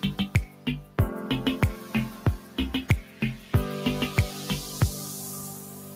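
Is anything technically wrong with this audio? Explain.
Yes. Two related faults are audible, both caused by a speech-tuned noise suppressor.

The first is a noise suppressor applied to music or sounds, running through the whole clip. The suppressor treats anything steady, such as sustained tones, ambience or reverberant tails, as background noise and pulls it down, while sudden onsets mostly pass. The result is a pumping, fluttery level that swings by around 10 dB. Unlike a compressor, it reacts to how steady a sound is rather than how loud it is.

The second is sound cut by the noise suppressor, heard as short dips at 0.47–0.67 s (about 6 dB), 2.39–2.57 s (about 5 dB), 3.03–3.21 s (about 5 dB), and from 5.55 s to the end (about 6 dB). At these points the suppressor misjudged held or decaying material as noise and attenuated it more than its surroundings. Sustains sink and tails are clipped short while attacks mostly come through, which separates these dips from dropouts or fades that would swallow everything equally.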